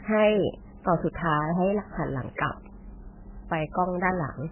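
Heavy MP3 compression at a very low bitrate likely starved the encoder, cutting everything above 3.1 kHz and leaving the speech dull, watery and swirly throughout.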